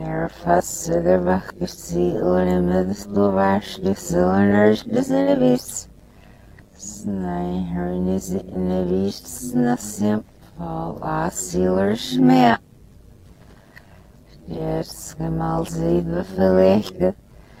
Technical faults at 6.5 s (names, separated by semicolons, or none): overlap-add ripple